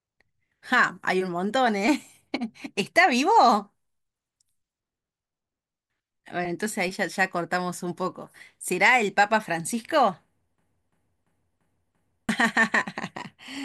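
Speech that breaks into a system hang loop from 10.58 to 12.29 s: the same 341 ms slice repeats five times at about 2.9 per second, giving a machine-gun stutter while roughly a second and a half of real audio goes missing. The machine or driver stalled while the hardware kept replaying its ring buffer, which fits a 16384-sample buffer. A waveform shows identical blocks, and a spectrogram shows one pattern stamped repeatedly.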